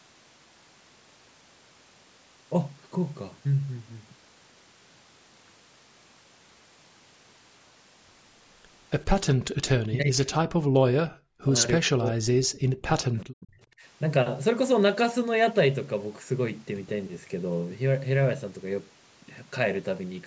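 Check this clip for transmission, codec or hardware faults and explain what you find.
The speech in this clip has one fault, repeated in four places. Speech suppressed in double talk occurs at 9.88–11.55 s, 11.87–12.25 s, 12.43–12.90 s and 13.07–13.61 s. The level falls by roughly 40 dB at its deepest, so the talker fades and then breaks up into fragments over about 2.8 seconds. The likely cause is an echo canceller facing simultaneous talk from both ends, unable to tell this talker from loudspeaker echo, and attenuating everything. The call's microphone processing, with nothing above 8 kHz, is a normal path.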